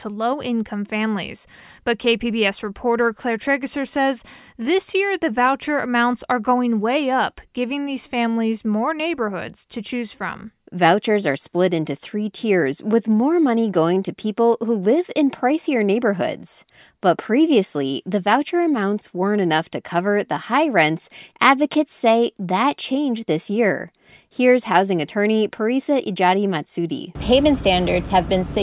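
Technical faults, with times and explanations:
No technical faults can be heard anywhere in the speech recording.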